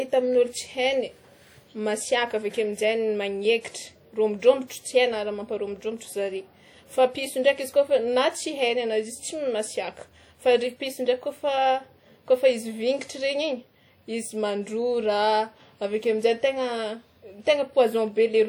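From start to finish the speech has plainly audible ringing and a washy, breathing hiss, likely WMA compression smearing quantisation noise, which fits a bitrate around 48 kbps.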